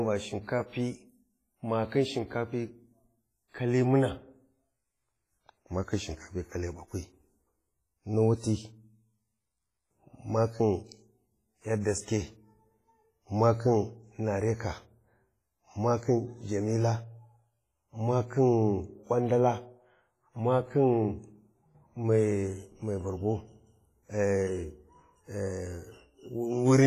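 From start to end, the speech carries heavy transform-codec damage, likely WMA compression. Consonants and syllable onsets ring and smear, with quantisation noise spread over tens of milliseconds around each sound, and a hiss that swells and fades with the level of the voice. Weak spectral detail has been zeroed, leaving a washy texture, and nothing is present above 15.4 kHz. This degree of damage fits a low bitrate of around 24 kbps.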